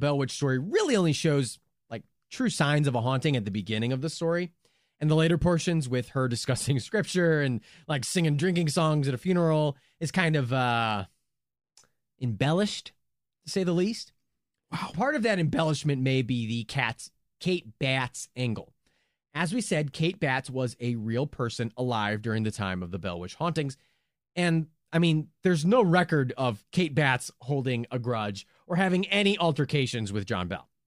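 No technical faults are audible.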